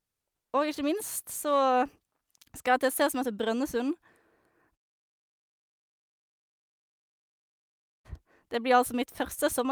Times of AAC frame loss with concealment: none

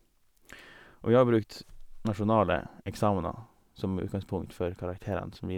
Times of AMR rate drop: none

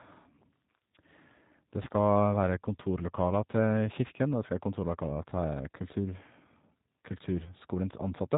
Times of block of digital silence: none

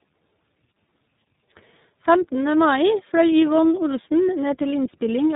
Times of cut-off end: none

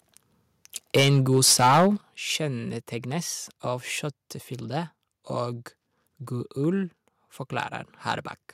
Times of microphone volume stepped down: 1.00, 2.01

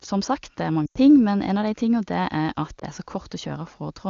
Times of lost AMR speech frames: 0.86-0.98, 2.79-2.84

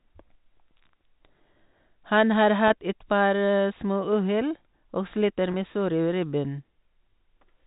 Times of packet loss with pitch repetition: 2.68-2.70, 5.52-5.54

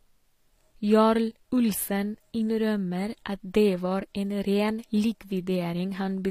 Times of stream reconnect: none

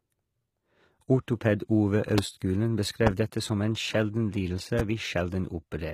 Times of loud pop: 2.18-2.21, 3.07-3.09, 4.79-4.82

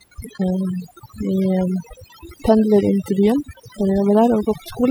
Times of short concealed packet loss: none

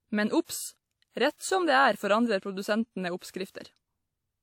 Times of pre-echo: 1.36-1.41, 3.50-3.55

